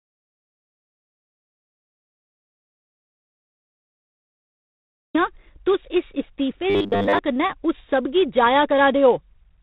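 Across the whole clip, G.726 ADPCM coding at 24 kbit/s adds a harsh, rasping hiss that tracks the speech level, and the spectrogram shows nothing above 4 kHz. From the very start until 5.15 s there is an audio dropout to silence, likely from lost input: total silence with no room tone and a blank spectrogram. From 6.70 to 7.20 s, between "इस इस्तीफे" and "कन्नै उस", the speech turns into a rigid, metallic 100 Hz buzz, likely from repeated short buffers. A 10 ms block is looped for most of that half-second, showing as evenly spaced harmonic stripes and an identical repeating waveform.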